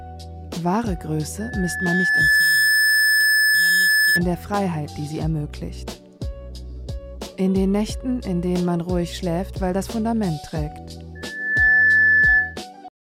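A single piercing tone at 1.7 kHz swells up from 1.4 s, taking around a second to reach full strength, then holds some 10 dB above the rest of the sound until it cuts off at 4.22 s. The same pitch returns at 11.15 s, climbing faster, in about half a second, and stops at 12.60 s. This is loudspeaker feedback squeal: the microphone hears its own loudspeaker, and at 1.7 kHz the loop gain tops unity, so that frequency keeps feeding itself.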